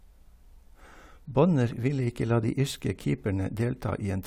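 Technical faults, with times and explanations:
No technical faults can be heard in this speech.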